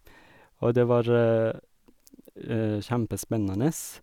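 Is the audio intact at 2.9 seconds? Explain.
Yes, the audio is intact at 2.9 seconds, with no dropout, click, distortion or other fault at that moment.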